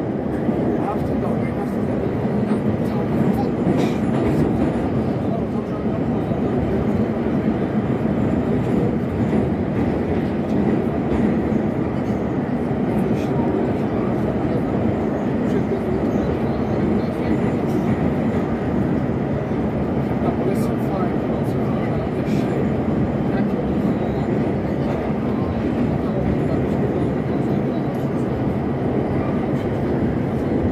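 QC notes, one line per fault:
No faults detected on review; nothing to log.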